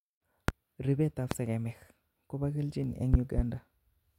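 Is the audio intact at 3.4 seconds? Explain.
No. A loud pop spans 3.14 to 3.42 s: two sharp thumps, about 20 dB above the speech. A sudden voltage pulse is the likely cause.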